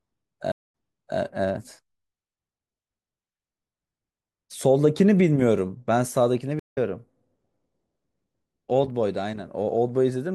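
At 0.52 s the speech drops out for 196 ms and comes back having jumped 480 ms earlier, so you hear a short stretch again. That's a stream reconnect: the link broke, the player reopened it with a fresh decoder, and the server resent a burst. A second stream reconnect hits at 6.59 s with 147 ms of silence, but this time the speech picks up roughly a tenth of a second later, so a bit is simply skipped.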